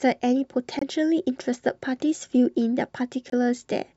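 At 0.79 s and again at 3.30 s the speech drops into sudden silence for about 40 ms, each time what sounds like one frame. That's a corrupt frame muted: the decoder rejected a damaged frame and the player slotted in silence, keeping timing intact.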